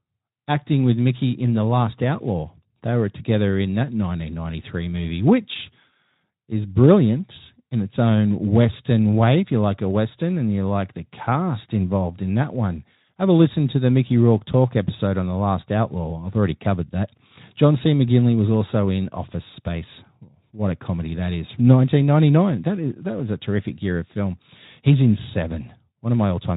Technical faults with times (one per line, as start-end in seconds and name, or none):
none